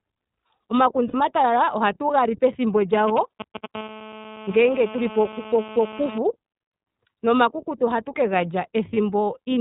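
The whole recording passes through the iLBC codec, and the damage is plainly audible. The speech sounds slightly rough and synthetic, and nothing reaches above 4 kHz. The result fits iLBC's 30 ms, 13.33 kbps mode, where each frame's excitation is coded on its own. A spectrogram shows a hard ceiling at 4 kHz, with empty space above it for the full 10 seconds. Harmonic structure below that ceiling looks slightly smeared and noisy.

At 1.08 to 1.15 s, about 60 ms of audio goes missing as lost iLBC frames, which fits two dropped 30 ms frames. The decoder fills the gap by repeating the last pitch cycle blended with noise, so it sounds like a brief held, buzzy vowel. Clean speech resumes immediately afterwards. The same thing happens once more at 8.93 to 8.97 s, a 30 ms loss consistent with a single frame. On a spectrogram each gap appears as a short stretch of flat, repeated harmonics with added noise, followed by a sharp return to normal structure.

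From 2.93 to 3.66 s, GSM signalling bursts break in. A nearby 2G phone exchanging brief radio traffic, rectified by the audio circuit, produces a galloping dit-dit-dit of short buzzes at a 217 Hz pulse rate. They are only a little quieter than the speech. In the waveform they appear as clustered spiky pulse trains, and on the spectrogram as vertical stripes with evenly spaced harmonic lines.

From 3.75 to 6.18 s, GSM phone buzz takes over. This is a continuous, raspy 217 Hz buzz with many harmonics, caused by the phone now transmitting steadily as in a call. It sits about 14 dB below the speech and bears no relation to what is being said. A spectrogram shows a dense comb of horizontal lines at multiples of 217 Hz across that span. In the waveform it appears as a regular pulse train beneath the speech.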